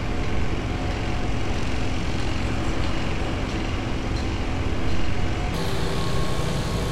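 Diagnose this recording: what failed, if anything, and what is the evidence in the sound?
From 5.54 s to the end, everything runs fast and sharp, about 1.5 times speed and roughly 7 semitones up. That's a wrong sample rate at playback: the samples get clocked out faster than they were captured, with no conversion, which fits 32 kHz material played at 48 kHz.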